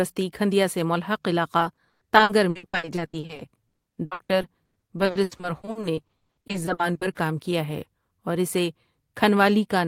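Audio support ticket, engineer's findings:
Repeated packet loss (robotic sound), 1.59–7.17 s. Choppy speech with pieces missing; over a third of the stretch is concealed, gaps up to 120 ms. Likely network/jitter-buffer path: lost packets patched by extending prior audio. Differs from a single dropout: dozens of closely spaced holes, not one silence.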